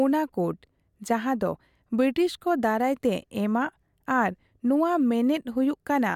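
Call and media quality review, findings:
No audible defects found in the speech recording; nothing to raise against any component.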